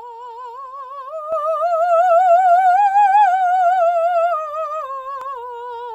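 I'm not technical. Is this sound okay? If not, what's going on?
No. Sudden gain jump at 1.32 s: the music and its background hiss get louder together and stay louder, likely from a volume change applied instantly instead of gradually.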